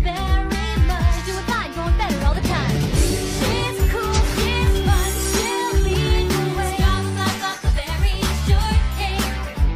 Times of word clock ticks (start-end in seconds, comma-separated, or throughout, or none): 0.61-9.55